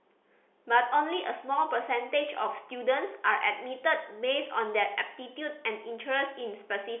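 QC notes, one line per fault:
No faults heard.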